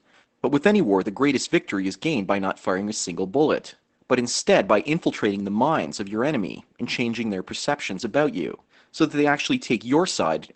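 Speech, with Opus voice compression audible throughout. The sound is muffled, slightly hoarse and faintly robotic, as a linear-prediction coder in SILK mode reconstructs the voice from a coarsely coded excitation. The damage is plainly audible and fits a low bitrate of about 12 kbps. On a spectrogram, energy stops at a flat ceiling near 8.5 kHz, with smeared harmonics and a granular texture in 20 ms steps.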